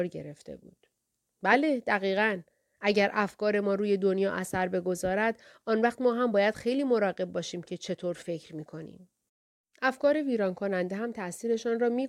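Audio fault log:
No faults logged on the speech track.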